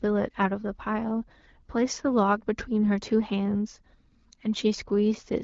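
Speech, carried over an AMR wideband (HD Voice) link at a rate that sounds like 12.65 kbit/s or close to it, with no technical faults heard.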